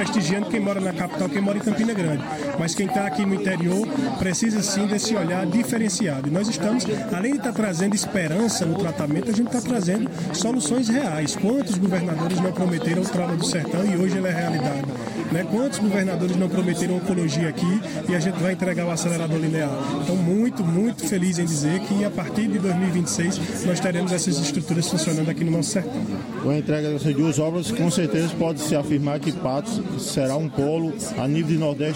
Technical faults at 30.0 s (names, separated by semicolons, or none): none